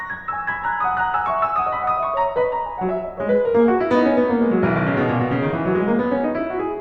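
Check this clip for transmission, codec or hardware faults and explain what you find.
No transmission, codec or hardware faults can be heard in this music clip; the signal stays continuous and intact throughout.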